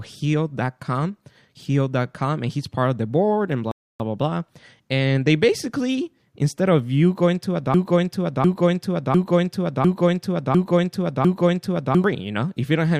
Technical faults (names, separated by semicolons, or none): rebuffering stall; broken-record loop